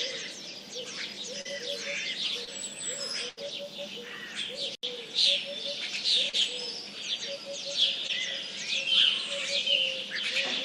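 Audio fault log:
1.41 s, 2.45 s, 6.29 s and 8.07 s: short concealed packet loss. At each point about 20 to 40 ms of audio never arrived in time, and the receiver bridged the hole by extending the preceding sound for roughly 20 to 40 ms before blending back into the real signal. Each one is a brief smear or wobble, and a very short sound can disappear. Unlike the burst at 3.29 s, these gaps are too short to decay audibly.
3.29 to 3.39 s: burst of packet loss. Roughly 80 ms went missing in one block, and the receiver filled about 82 ms by continuing the last sound while fading it down. Pitched material therefore becomes a held buzz and noisier material a dwindling hiss. When the real audio returns, the part in between is gone. What separates it from the short losses is its length.
4.75 s to the end: the input likely switched to a poorer device. An 80 ms silence marks the switch, and afterwards nothing remains above 12.1 kHz, so the sound turns duller. 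The level shifts by a few decibels, and a faint new noise floor sits well below the signal. Unlike packet loss, this is a lasting change of tone and background rather than a momentary gap.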